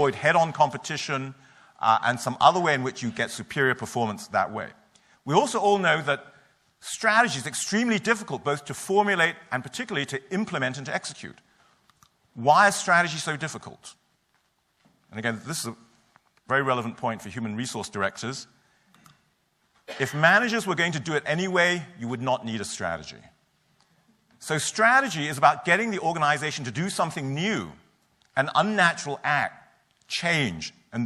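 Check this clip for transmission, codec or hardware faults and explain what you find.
No transmission, codec or hardware faults are detectable anywhere in the audio.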